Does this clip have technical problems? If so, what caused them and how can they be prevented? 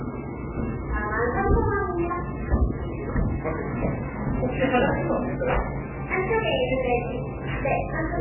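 Yes. Throughout, the sound is dull and watery, with a swirling, bubbling quality and smeared attacks, and nothing comes through above about 3 kHz. This is likely heavy MP3 compression at a very low bitrate, in the region of 8 kbps. Starved of bits, the encoder cuts off the treble and drops weak frequency lines that flicker in and out from frame to frame. To prevent it, encode at a much higher bitrate or keep a lossless copy.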